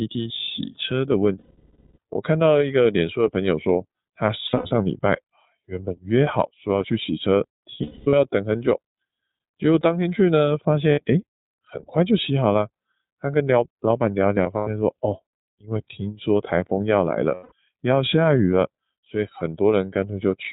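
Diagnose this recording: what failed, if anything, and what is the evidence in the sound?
The codec stage degraded the audio. The speech passed through the iLBC codec for its full length, which caps the band at 4 kHz and codes each 30 ms frame independently. The sound fits the 13.33 kbps mode. The damage is plainly audible: the speech is dull and band-limited, with a rough, slightly synthetic texture caused by the coarse excitation coding, and it does not change from start to finish.

The network stage dropped packets, producing lost iLBC frames at 1.38–1.98 s, 4.47–4.71 s, 7.77–8.14 s, 10.92–11.00 s, 14.43–14.68 s and 17.34–17.52 s. The 600 ms gap at 1.38 s is the worst. The others are shorter. Some are scattered bursts, such as 300 ms missing across 360 ms, with runs of up to about 200 ms. In each gap the decoder repeats the last pitch cycle mixed with noise, so you hear a held, buzzy vowel that fades in the longer gaps. 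The speech comes back right away.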